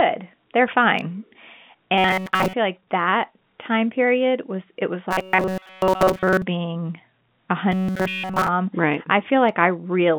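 From 1.98 to 2.53 s, just before "like that time period", then from 5.11 to 6.44 s after "period was it was", and again from 7.72 to 8.48 s, the speech turns into a rigid metallic buzz at 188 Hz. This is robotic sound from repeated short buffers, likely a chunk of about 5 ms replayed over and over while the real audio is skipped. Unlike a dropout, the sound never goes silent, and the buzz pitch stays fixed instead of following the voice.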